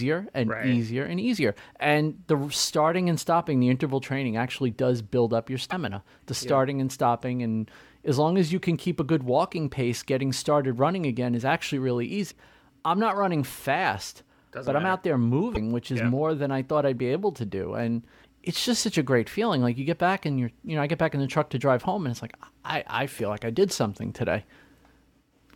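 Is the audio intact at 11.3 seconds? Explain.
Yes, at 11.3 seconds the audio is intact, with no audible fault at that moment.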